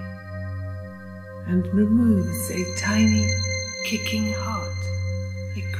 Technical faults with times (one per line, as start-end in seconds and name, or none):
none